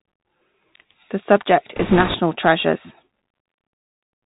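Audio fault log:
throughout: Bluetooth CVSD headset codec. The speech is confined to a telephone-style band with nothing above 4 kHz, and the codec damage is plainly audible. CVSD sends a single up-or-down bit per sample, which fits a 64 kbit/s stream, and adapts its step size as it goes. Where the speech rises quickly in level or pitch, the step cannot keep pace, so loud high-frequency parts distort, sibilants come out scratchy, and a fine granular hiss sits under everything.
1.76–2.15 s: bit errors on a Bluetooth voice link. For about 0.39 s the speech takes on a rushing, crackly noise layered over the CVSD sound, with an error rate of roughly one bit in twenty. There are no sharp clicks because each CVSD bit moves the output by only one small step and the codec's adaptation lets a wrong step fade out. The corruption therefore comes through as a dense wash of noise.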